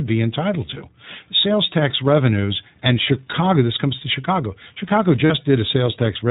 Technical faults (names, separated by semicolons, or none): iLBC codec; lost iLBC frames